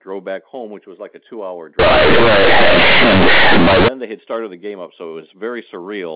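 After "like a two hour", from 1.79 to 3.88 s, companded audio is read as linear. Mu-law bytes play unexpanded, so quiet sound blares. It is harsh, buzzy distortion until "they had started".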